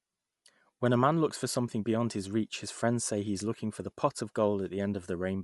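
Speech, with an edge of breathy, grainy noise over its upper frequencies throughout and nothing above about 11.6 kHz. This is likely Bluetooth LC3 compression at a rate that fits around 48 kbps. The noise-filled treble tells it apart from a plain low-pass filter.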